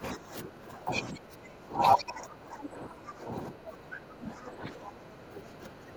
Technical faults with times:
0.00-5.96 speech suppressed in double talk

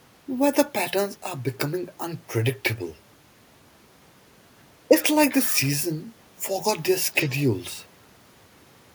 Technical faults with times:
none

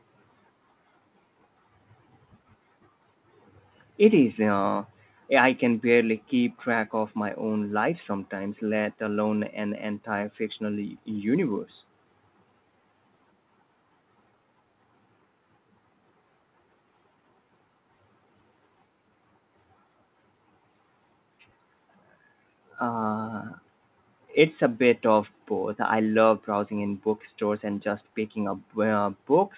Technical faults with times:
none

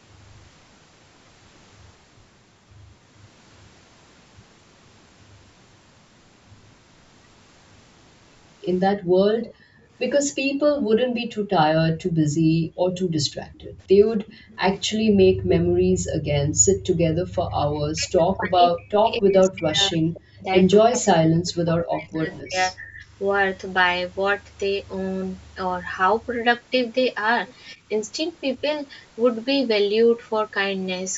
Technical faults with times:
8.96-17.17 background gated by the echo canceller
9.45-10.59 echo leak
13.33-13.40 speech suppressed in double talk
14.27-15.59 echo leak
17.45-23.04 speech suppressed in double talk
19.51-19.57 echo leak
27.76-27.88 background gated by the echo canceller

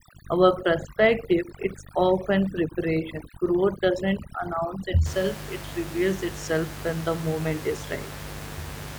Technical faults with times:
0.00-8.99 mains buzz
0.00-5.06 overdone noise removal

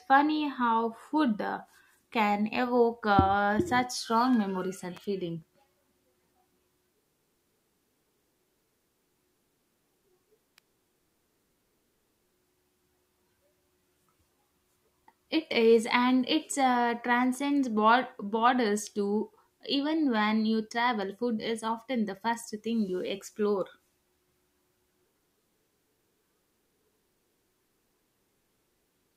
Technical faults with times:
4.97 electrical switching spike
10.58 electrical switching spike

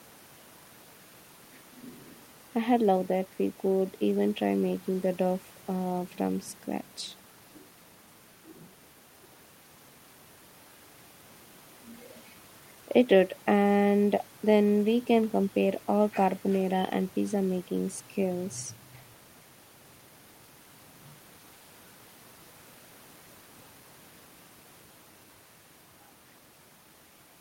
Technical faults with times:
none

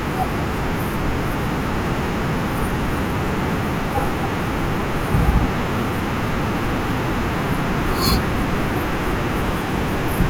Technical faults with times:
6.91 dropped samples

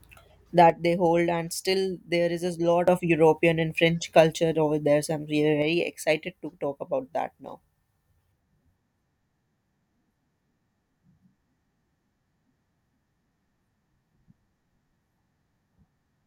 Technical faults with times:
0.70-2.88 one channel drops out
5.62-16.27 one channel drops out

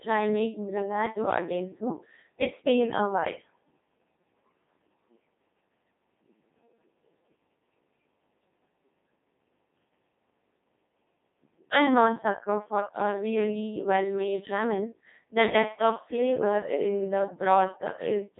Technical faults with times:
0.00-18.40 Codec 2 vocoder

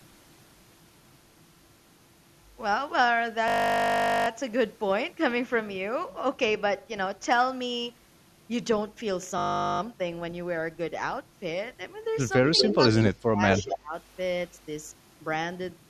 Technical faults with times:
3.48-4.28 system hang loop
9.38-9.80 system hang loop
12.47-12.88 echo leak
12.64-12.79 speech suppressed in double talk
13.04-13.95 speech suppressed in double talk
13.50-13.76 echo leak

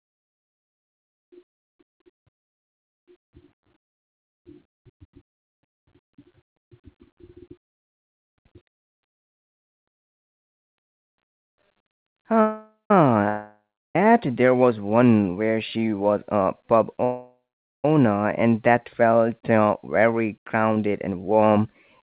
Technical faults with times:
7.83-8.34 call audio freeze
12.41-12.91 call audio freeze
13.29-13.96 long network dropout
15.51-16.93 jitter buffer speed-up
17.04-17.85 call audio freeze
19.50-22.01 jitter buffer speed-up

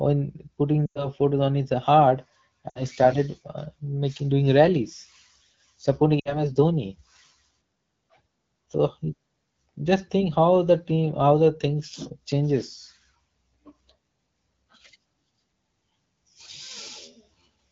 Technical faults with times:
0.86-1.07 lost AMR speech frames
2.70-2.82 lost AMR speech frames
6.20-6.43 lost AMR speech frames

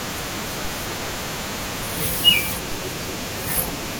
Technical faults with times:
2.72 DC step

